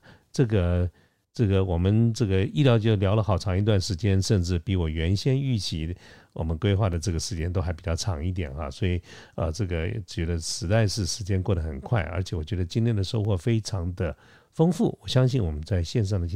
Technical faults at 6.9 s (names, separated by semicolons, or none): underrun with held sample